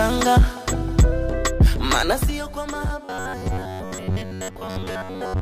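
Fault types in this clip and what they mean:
zipper noise: from 2.05 to 2.39 s the level drops about 10 dB in audible 3 dB steps, roughly ten per second, each step adding a small click.
robotic sound from repeated short buffers: from 3.05 s to the end, a rigid metallic buzz at 93.8 Hz, likely from a short stretch of audio being repeated while most of the real audio is skipped.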